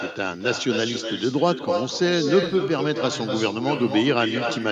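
Throughout the speech, echo with no canceller is present: the far end's loudspeaker is picked up by its microphone and returned unremoved. Each phrase is followed roughly 300 ms later by a thinner copy sitting about 7 dB below the direct speech.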